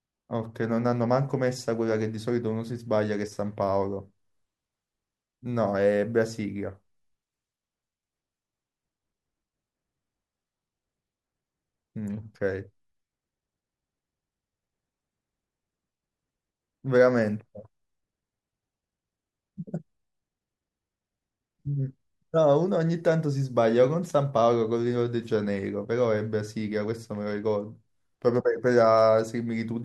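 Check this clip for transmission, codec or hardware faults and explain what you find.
Nothing in this speech recording points to a transmission, codec or hardware problem; the signal stays continuous and stable throughout.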